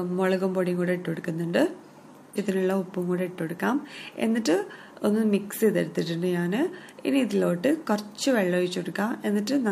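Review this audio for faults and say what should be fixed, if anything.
At about 2.33 to 2.37 s there's a short blip and the sound jumps forward, with a chunk of the programme gone. That's most likely a stream segment skipped: one segment didn't load, so the player just carried on with the next. Worth fixing by adding retries and a bit more buffering before playback moves past a failed segment.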